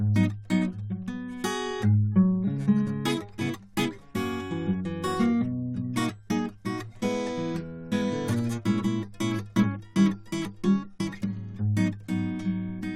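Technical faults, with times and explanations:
The music contains no audible technical faults.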